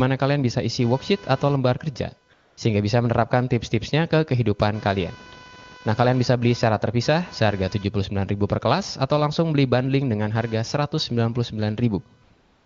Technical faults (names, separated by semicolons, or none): computer activity noise; AMR comfort noise